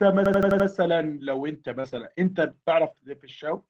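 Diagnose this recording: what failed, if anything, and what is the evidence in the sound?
Driver or buffer stage: a system hang loop from 0.26 to 0.68 s. An 85 ms slice repeats five times, an 11.7 Hz stutter, which fits a 4096-sample ring buffer replaying.

Network stage: short concealed packet loss at 1.80 to 1.86 s. About 40 ms never arrived, and the decoder papered over it by extending the preceding sound, leaving a brief smear.

Network and codec: a lost packet rebuilt from error correction from 1.84 to 1.98 s. Around 80 ms sounds grainier, pointing to several packets recovered from Opus's low-bitrate in-band copies.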